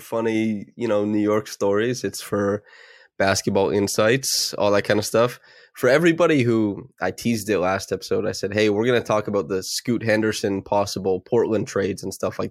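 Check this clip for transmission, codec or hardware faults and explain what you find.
Nothing faulty can be heard anywhere in this speech recording.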